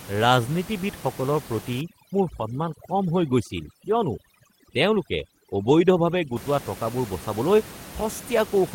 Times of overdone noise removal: 1.81-6.36

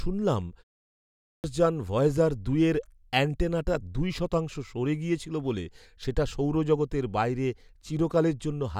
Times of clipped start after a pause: 0.88-1.44

